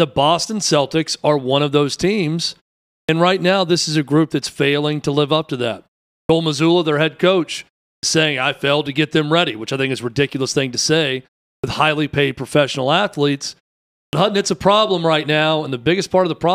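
Clipped starts after a pause occur at 3.03, 6.23, 7.97, 11.58 and 14.07 s. Each follows a gap of 0.36 to 0.55 s, during which the output device drops into a low-power state. When the speech resumes, the device is still waking, so roughly 56 to 64 ms of the onset is lost each time. Words therefore jump out of silence with their first sounds missing, while the pauses themselves fall quiet as expected.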